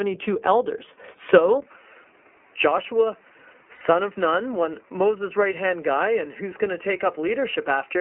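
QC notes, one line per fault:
throughout, iLBC codec: The whole clip sits in a telephone band of roughly 250 Hz to 3.4 kHz, with a rough, slightly synthetic texture from coding each 30 ms frame on its own. The plainly audible coding damage fits the 13.33 kbps iLBC mode. This differs from a device switch because it is present from the very start.
1.60 s to end, input switched to a poorer device: A brief 20 ms silence, then the sound turns duller and boxier, losing everything above 3 kHz. The level drops by about 5 dB and a new noise floor appears roughly 35 dB below the signal. This is likely a change to a poorer microphone. Unlike codec damage, it begins abruptly partway through.
3.74 to 3.82 s, lost iLBC frames: For 60 ms the sound becomes a held, faintly buzzy vowel, which fits two lost 30 ms frames that the decoder filled by repeating the last pitch cycle mixed with noise. It is shorter than a device change, and the voice is clean again immediately afterwards.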